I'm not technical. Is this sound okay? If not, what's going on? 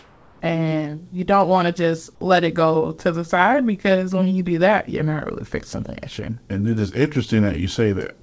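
No. For the first 0.41 seconds, the call likely stopped sending audio while nobody spoke, and the receiving end filled the gap with comfort noise in place of the background. You hear a smooth, featureless hiss at the same loudness instead of the real room sound.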